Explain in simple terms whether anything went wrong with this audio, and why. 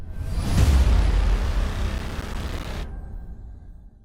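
Processor overload crackle appears from 1.98 to 2.65 seconds. The processor fell behind and missed its deadline over and over, around thirty times. Each miss left a tiny silent gap of a few milliseconds, and together those gaps form a gritty crackle that stops once the load eases.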